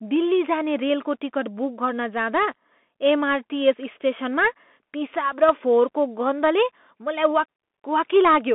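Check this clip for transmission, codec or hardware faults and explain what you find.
One fault runs throughout: a Bluetooth CVSD headset codec. A one-bit delta modulator with an adapting step, consistent with a 64 kbps link, confines the speech to 200 Hz–3.5 kHz, with nothing above 4 kHz. Sharp high sounds overrun the step and distort, s sounds turn scratchy, and granular hiss sits underneath.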